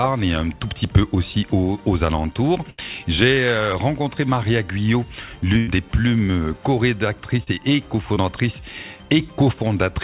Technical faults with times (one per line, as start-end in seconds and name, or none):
2.70-2.80 burst of packet loss
5.58-5.69 burst of packet loss
7.43-7.48 short concealed packet loss
8.14-8.18 short concealed packet loss